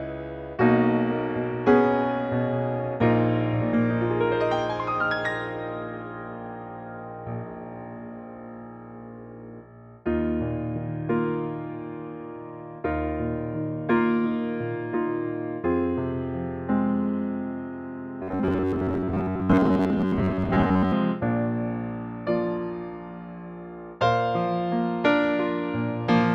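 From 18.23 to 20.93 s the audio turns into a rigid metallic buzz at about 93.8 Hz, robotic sound from repeated short buffers, likely from a roughly 10.7 ms chunk replayed for most of that stretch. A spectrogram shows evenly spaced harmonic stripes; the waveform shows identical repeating cycles.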